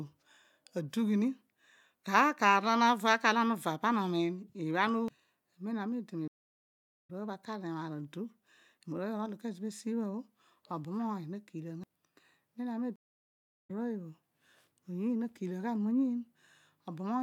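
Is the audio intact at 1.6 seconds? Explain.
Yes, the audio at 1.6 seconds is intact, with no fault there.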